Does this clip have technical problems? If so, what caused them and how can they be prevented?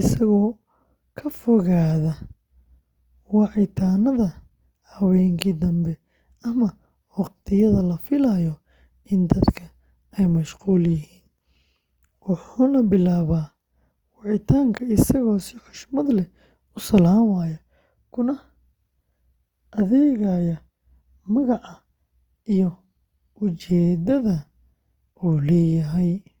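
Yes. Throughout the speech, the sound is grainy, rough and noisy, and the damage is plainly audible. The likely cause is Opus compression in its CELT mode, filling bit-starved bands with folded or noise energy. This fits a low rate near 24 kbps. Encoding at a higher bitrate would prevent it.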